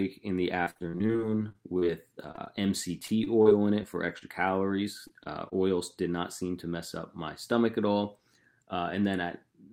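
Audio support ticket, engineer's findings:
Choppy, robotic speech 0.63–4.23 s, 22 short holes up to 52 ms, about 12% of the stretch patched: repeated packet loss (robotic sound), jitter buffer/decoder extending last audio.

Brief smears or wobbles at 5.07, 5.23 and 5.49 s, each about 20 ms: short concealed packet loss, the decoder bridging a late packet before blending back.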